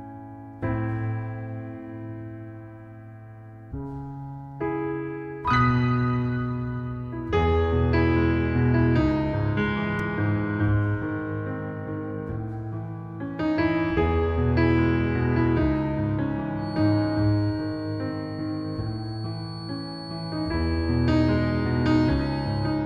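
A loudspeaker-to-microphone loop likely sat at the edge of feedback. From 16.54 s to the end, a feedback whistle sounds: a 4.4 kHz tone that slowly swells and fades, well beneath the sound.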